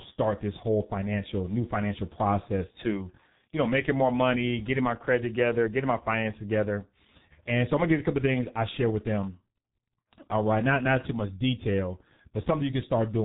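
From start to finish, the speech has passed through the G.723.1 codec, an early internet-telephony coder that rebuilds the voice from a compact model refreshed only every 30 ms frame. The damage here is heavy and fits a bitrate of about 6 kbit/s. Nothing above 3.8 kHz survives, so the speech sounds muffled and boxed-in. The sluggish model updates leave the voice hoarse and smear the consonants together.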